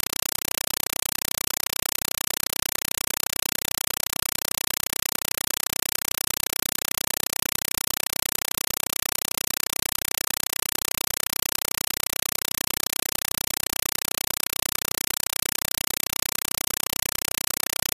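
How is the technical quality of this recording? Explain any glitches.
Pretty rough, honestly. The speech is completely buried, because the whole clip is a compressed stream played as audio. From start to finish there's loud, chattering static instead of sound. What's happening is that a Dolby Digital (AC-3) bitstream, probably arriving over S/PDIF or HDMI, is being treated as plain samples rather than decoded. Each coded frame comes out as a harsh noise burst of about 5.33 ms followed by silent padding, repeating 31.25 times a second. That burst density fits a stream around 256 kbps.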